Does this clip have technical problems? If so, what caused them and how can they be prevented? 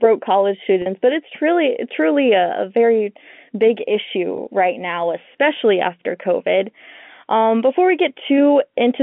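Yes. Packet loss with pitch repetition occurs at 0.82 to 0.86 s, before "but it's truly truly", and at 4.36 to 4.38 s, after "a a very big". About 40 ms and 20 ms went missing. The receiver repeated the last pitch period, causing a brief buzzy hold. Forward error correction with a larger jitter buffer would prevent it.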